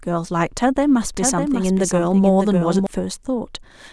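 From 1.15 s to 2.87 s the speech carries a doubled audio track: a second full-band copy trails the original by about 0.7 s, a few decibels quieter. It most likely comes from the same signal reaching the mix twice, once through a slower path. What separates it from a room echo or reverb tail is that the copy has no decay or room colouring, and it starts and stops abruptly rather than fading.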